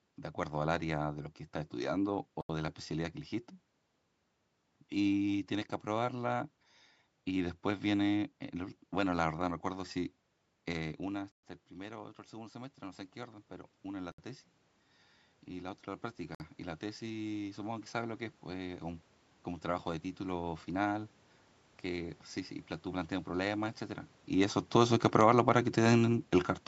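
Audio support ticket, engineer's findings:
Dropouts to silence at 2.41 s (82 ms), 11.32 s (117 ms), 14.12 s (65 ms), 16.35 s (54 ms). Playback resumes after each gap. Likely Bluetooth stall: delayed packets emptied the headphone buffer, audio paused until retransmissions arrived.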